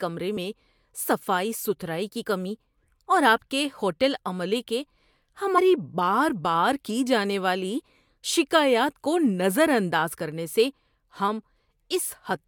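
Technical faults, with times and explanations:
0.36 s, 2.25 s and 5.57 s, compressed frames skipped: the audio jumps ahead by a few frames each time, losing about 30 ms at the first and about 100 ms at the others, between "صفائی ستھرائی کی" and "کمی اور آپ کے", and before "بار بار کی جانے".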